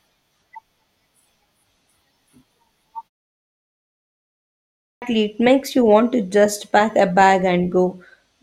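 Speech, with a clipped start after a pause at 4.51 s. After 1.5 s of silence, the output device appears to have gone to sleep and needed time to wake and lock again. The first 0.51 s of the next phrase, through 5.02 s, is swallowed, so the speech starts abruptly in mid-sound. Muted pauses differ because they only silence the gap and return in time, losing no speech.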